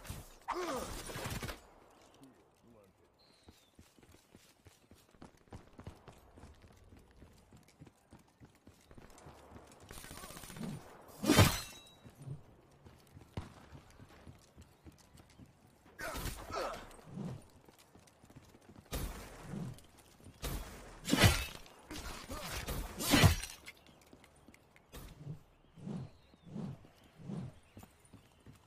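No technical faults are audible.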